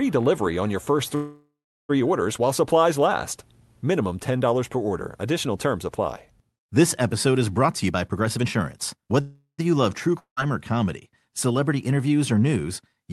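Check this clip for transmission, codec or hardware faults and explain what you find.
Three kinds of transmission fault are audible: two call audio freezes, a jitter buffer speed-up, and one long network dropout. All of this sits on a call-codec path whose audio stops at about 12 kHz, which fits a super-wideband Opus stream.

Call audio freeze, 1.15 to 1.91 s and 9.21 to 9.60 s. The first comes right after "delivery on your first". The likely cause is held-up packets that let the jitter buffer run dry. The receiver stretches the last sound into a fading buzz, then about 0.36 s of silence, and resumes cleanly at "orders while supplies last". Nothing is lost, but a 0.74 s gap is inserted. The second freeze inserts 0.38 s, about 0.11 s of it silent, before "you love true". On a spectrogram each freeze shows a smeared, repeating harmonic band that decays into a blank column.

Jitter buffer speed-up, 7.65 to 9.20 s, starting after "episode is". 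The buffer has banked too much audio, so the receiver repeatedly cuts out pieces of one or a few pitch periods, removing roughly 0.3 s in total. The speech runs at about 122% speed with unchanged pitch and sounds rushed. In the waveform, syllables are compressed in time and pauses shorten. The spectrogram keeps the same harmonic spacing, with occasional tiny seams.

Long network dropout, 10.19 to 10.39 s. Audio stops arriving, likely because packets were lost outright. The last sound decays as a brief buzz into about 0.1 s of silence, and the speech comes back with about 0.18 s of content missing. It appears as a short flat section in the waveform and an empty vertical band on the spectrogram. The speech on either side does not join up.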